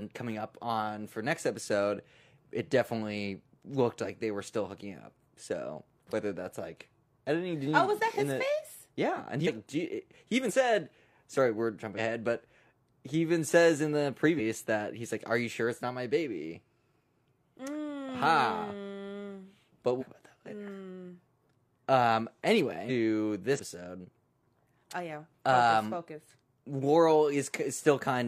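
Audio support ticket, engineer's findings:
Speech jumps forward at brief smeared blips, not hard clicks: 9.43–9.48, 10.45–10.51, 11.94–11.99 (before "but he even says"), 14.35–14.40 (between "even says in the" and "that he's like"), 19.97–20.04, 22.85–22.91, 23.55–23.60 s. Compressed frames skipped: decoder stage drops missing or damaged 46.4 ms frames. Each jump loses roughly 50 ms to a second of audio, the largest at 22.85 s. Overlapping neighbour frames smear each join.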